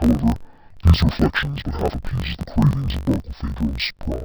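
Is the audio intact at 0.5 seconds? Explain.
No. At 0.5 s, as everywhere else in the speech, the audio shows interleaved audio read as planar. Each block of about 21.3 ms, which fits a 1024-sample block, holds alternating left and right samples, but its first half is read as one channel and its second as the other. Each half is stretched to fill the block, so the speech sounds an octave low, doubled and choppy, chopped at the 46.9 Hz block rate.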